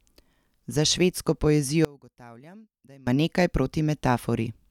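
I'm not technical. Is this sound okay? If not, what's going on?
No. From 1.85 to 3.07 s the speech almost disappears, leaving a faint trace. The likely cause is one channel inverted, cancelling the centre.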